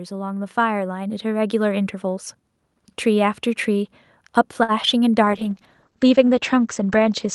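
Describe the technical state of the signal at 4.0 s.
At 4.0 s the speech signal is intact, with no audible fault at that point.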